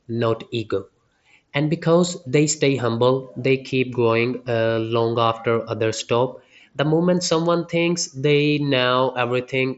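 Speech, with no technical faults to report.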